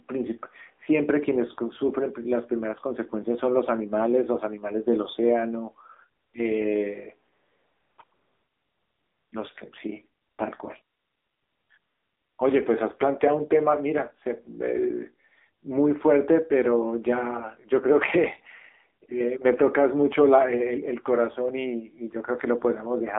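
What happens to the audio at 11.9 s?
From 11.78 to 12.38 s the real background drops out and a smooth, steady hiss takes its place before switching back. This is AMR comfort noise: for about 600 ms the phone judged the talker silent, stopped sending speech frames, and the receiver filled the gap with synthetic noise built from a rough description of level and spectrum.

Across the whole clip, including this moment, the speech sounds boxed in and buzzy, with nothing below about 250 Hz or above 3.7 kHz. That is the AMR narrowband mobile codec squeezing speech through a vocal-tract model at a low rate, which fits a mode around 7.4 kbps, leaving plainly audible synthetic, metallic damage.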